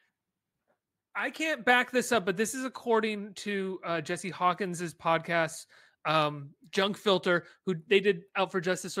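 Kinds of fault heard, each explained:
Nothing stood out on listening to the speech.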